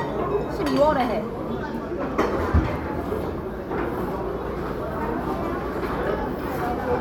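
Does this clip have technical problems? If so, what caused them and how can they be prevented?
No, this clip has no technical problems, so there is nothing to trace to a cause or prevent.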